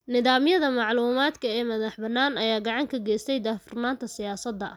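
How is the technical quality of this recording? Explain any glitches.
No glitches or technical faults are audible anywhere in the recording.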